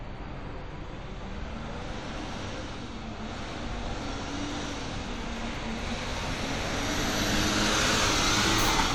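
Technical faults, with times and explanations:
Nothing here stands out as a technical fault; it's just sound running along with no glitches to flag.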